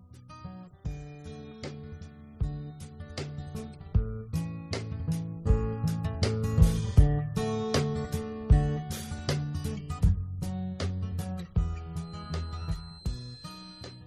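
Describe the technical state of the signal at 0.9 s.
The signal is intact at 0.9 s, with no fault audible at that point.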